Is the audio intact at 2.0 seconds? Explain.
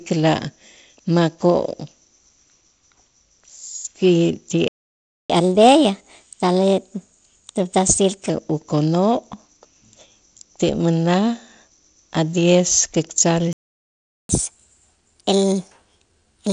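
Yes, at 2.0 seconds the audio is intact, with no fault at that moment.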